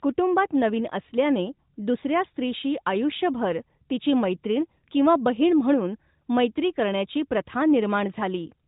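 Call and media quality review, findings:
Nothing stood out on listening to this speech clip over the narrowband AMR mobile path at 12.2 kbps.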